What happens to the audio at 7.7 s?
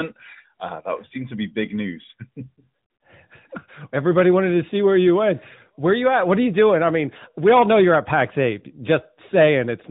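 At 7.7 s the speech carries on intact, with nothing breaking into it beyond the narrow, phone-band character of the AMR narrowband mobile codec that shapes the whole recording.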